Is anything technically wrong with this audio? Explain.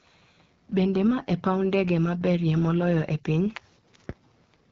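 Yes. Throughout the speech the AMR wideband (HD Voice) codec is plainly audible: the sound is rough and raspy, which fits a low 8.85 kbit/s mode. A spectrogram shows an empty band above 7.5 kHz and a smeared, noise-like 6.4 to 7 kHz band filled in by the codec.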